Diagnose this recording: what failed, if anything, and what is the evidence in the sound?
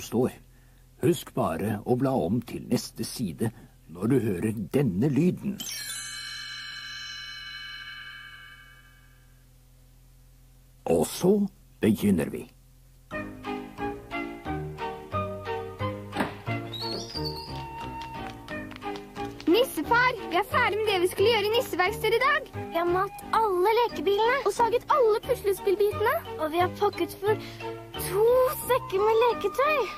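Two abrupt jumps in the sound, at 6.72 s and 24.60 s, point to the driver or buffer stage, likely a dropped buffer (overrun): a few milliseconds of samples were overwritten before collection, and the remaining audio was spliced directly together without any gap.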